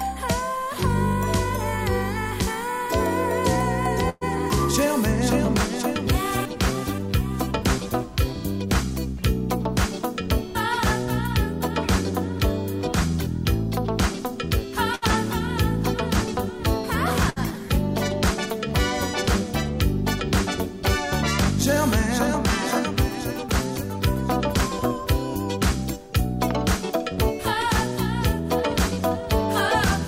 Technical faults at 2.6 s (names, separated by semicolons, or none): none